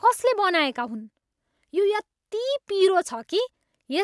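Nothing technical goes wrong anywhere in this speech recording, so there's no fault to point to at any moment along the way.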